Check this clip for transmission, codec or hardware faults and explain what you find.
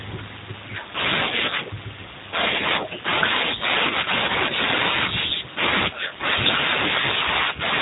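One codec fault runs through the whole speech clip: G.729 coding, plainly audible from start to finish. Throughout, nothing passes above about 3.8 kHz, so the sound is narrowband. Each 10 ms frame is rebuilt from a vocal tract filter, a pitch predictor and a sparse set of pulses rather than the original waveform. The result is intelligible but rough and slightly synthetic speech, coded with the 8 kbit/s G.729A variant.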